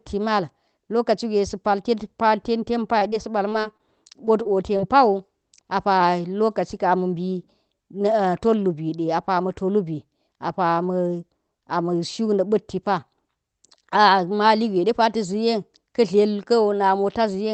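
Speech carried over a call link, with the codec cutting everything above 8 kHz, has short concealed packet loss: eight 20 ms gaps at 2.99, 3.11, 3.50, 3.61, 3.77, 4.25, 4.43 and 4.77 s. The receiver patched each gap by extending the preceding sound and blending back, so each one is heard as a brief smear or wobble. On a spectrogram these show as short, overly smooth strips with frozen harmonics. In the waveform they look like repeated cycles.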